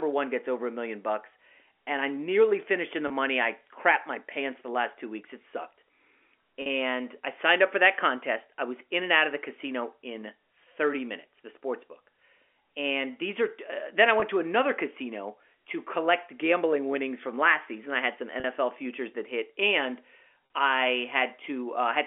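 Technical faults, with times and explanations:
3.08–3.10, 6.62–6.66, 14.20–14.22, 18.40–18.44 and 20.46–20.50 s: packet loss with pitch repetition. Each gap lasts 20 or 40 ms, which fits one or two lost packets. The receiver fills it by repeating the last pitch period. So the sound briefly holds with a slight buzz before resuming.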